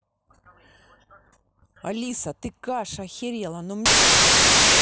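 From 3.86 s to the end of the clip the speech becomes loud, harsh broadband noise, a case of samples built from the wrong bytes. The low-order bytes land in the high positions, so rapid small variations become huge values. Unlike added background noise, it comes from the samples themselves.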